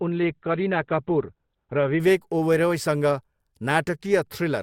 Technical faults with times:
0.00-2.00 adaptive stream starting at a low bitrate

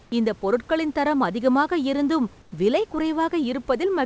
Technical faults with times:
0.04-0.12 comfort noise in place of the background
2.42-2.52 comfort noise in place of the background

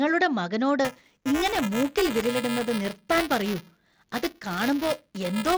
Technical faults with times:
0.85-5.57 buffer tearing

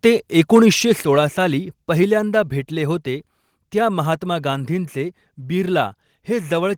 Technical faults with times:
1.02 microphone volume stepped down
2.04 microphone volume stepped down

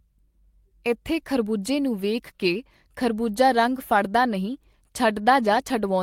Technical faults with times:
none

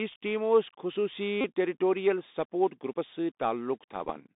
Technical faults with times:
0.00-4.35 Bluetooth CVSD headset codec
1.41-1.45 Bluetooth headset packet repeated
4.05-4.11 Bluetooth headset packet repeated

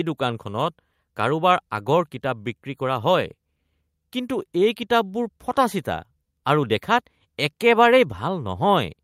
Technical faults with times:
none

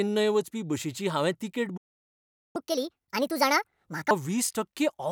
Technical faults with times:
1.77-2.56 playback stall
2.56-4.11 catch-up at higher speed

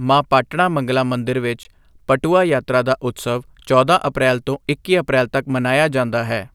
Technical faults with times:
1.63 block of digital silence

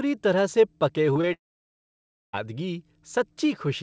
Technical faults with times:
1.14-1.25 short concealed packet loss
1.33-2.35 long network dropout

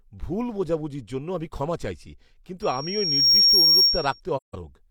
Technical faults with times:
2.62-4.20 loudspeaker feedback squeal
4.36-4.55 AAC frame loss with muting

